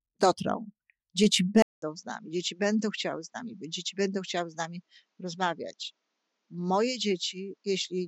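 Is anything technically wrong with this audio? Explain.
Yes. An input switched to a poorer device from 1.62 s to the end: a 200 ms silence marks the change, and afterwards nothing is heard above 7.6 kHz. The recording was likely moved mid-take onto a narrower-band microphone or a headset call profile, which cuts the top of the spectrum and brings its own character. The sound turns duller and boxier, drops by roughly 5 dB, and carries a faint new background noise about 50 dB below the signal.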